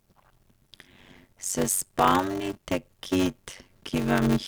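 From the start right through to the end, the speech carries a steady buzz at about 93.8 Hz. That's a block size mismatch (padded): each block comes up short, which fits a 512-sample read, and the gap gets zero-filled. So the speech runs slow at 0.625x but keeps its timbre.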